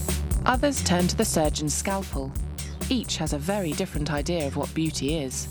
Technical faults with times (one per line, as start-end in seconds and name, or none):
1.54-5.51 sudden gain jump